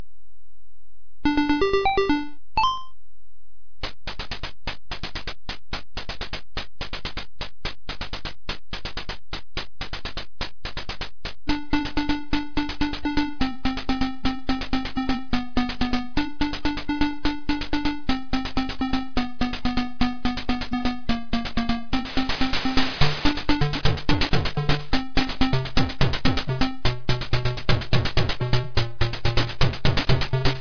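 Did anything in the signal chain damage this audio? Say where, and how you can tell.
No, nothing along the signal chain has left an audible mark on this audio at any point, and it arrives intact.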